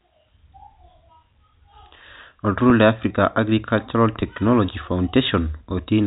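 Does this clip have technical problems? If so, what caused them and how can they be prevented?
Yes. At 2.70 s and again at 4.21 s the speech briefly sticks, with a tiny held, slightly buzzy moment of about 10 ms each instead of a clean continuation. This is packet loss with pitch repetition. A gap that short fits a single lost packet each time. The receiver bridged it by replaying the last pitch period of the voice and then cross-fading back into the incoming signal, so each hole is smoothed over rather than heard as a dropout. The narrow telephone band of the G.711 coding, with nothing above 4 kHz, can be heard throughout. To prevent the losses, carry the call over a less congested or prioritised network path and use a jitter buffer deep enough that late packets are not discarded.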